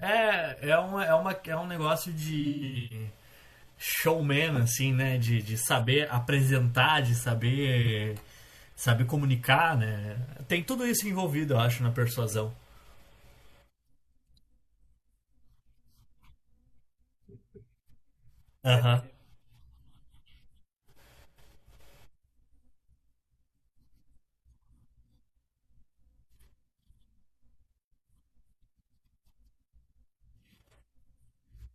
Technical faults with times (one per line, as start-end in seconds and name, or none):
2.40-3.06 AAC frame loss with concealment
7.82-7.88 AAC frame loss with concealment